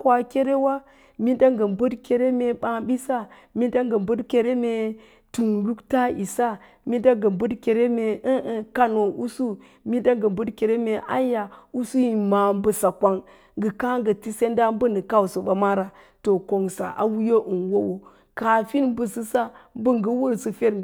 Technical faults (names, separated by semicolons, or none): none